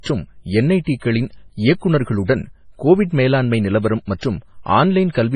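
From start to finish the speech sounds watery and swirly, with heavy smearing and nothing at all above 10.3 kHz, so the treble ends at a hard ceiling. The likely cause is MP3 compression at a very low bitrate, consistent with around 24 kbps. Short of bits, the encoder drops weaker frequency components that then flicker in and out from frame to frame, and it cuts the top band outright.

From 0.0 to 1.5 s a steady low tone at 50 Hz sits under the speech, roughly 35 dB below it. This is mains hum. A ground loop or a nearby transformer has coupled the power line's frequency into the signal path. The hum stops after 1.5 s.

At three points a brief hiss runs just ahead of a sharp onset, softening the attack. It comes first at 1.78 s, spread over 38 ms. The other two follow "கோவிட் மேலாண்மை நிலவரம்": at 4.05 s over 25 ms, and at 4.18 s over 44 ms. This is pre-echo. The codec spreads its quantisation noise evenly across each transform block, so noise scaled for the loud attack also fills the quiet moment before it.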